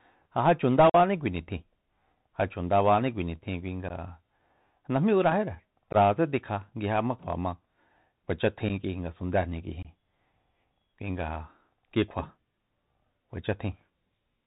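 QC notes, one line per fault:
throughout: Bluetooth CVSD headset codec. The speech is held to the narrow headset band, with nothing above 4 kHz, and the damage is plainly audible: a grainy hiss sits under everything and sibilants come out scratchy as the one-bit delta modulator, running at 64 kbps, fails to track fast, loud high content. That steady band-limited grit is the codec, not dropouts, because it never stops or leaves holes.
0.90–0.95, 3.89–3.92, 5.93–5.96, 8.69, 9.83–9.87: unconcealed Bluetooth headset packet loss. Five abrupt holes cut into the speech, lasting 45 ms just before "kui nitjin", 15 ms at 3.89, 15 ms just before "tikja nguijema kjua ma", 7.5 ms at 8.69, and 22.5 ms right after "ngasundéjni k'ui". Their lengths fit losing roughly seven, two, two, one and three short voice packets. With nothing patched in, each gap has hard edges, and the audio returns briefly quieter as the CVSD step size rebuilds. 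These isolated, timed dropouts are distinct from the continuous codec grain.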